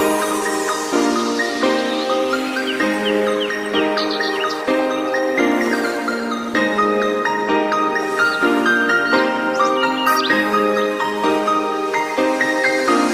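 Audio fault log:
Nothing to log here; I listened all the way and didn't catch a single glitch worth writing down.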